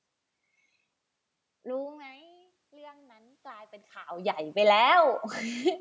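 Speech recorded through a call microphone shows automatic gain rising from 1.62 to 5.24 s. Around 2 s and again near 3.5 s the talker moves, and the level at the microphone falls by about 22 dB. The automatic gain control reads this as a quiet input. It raises its gain slowly, by about 9 dB, over more than three seconds. The voice and the room noise swell together as the gain climbs.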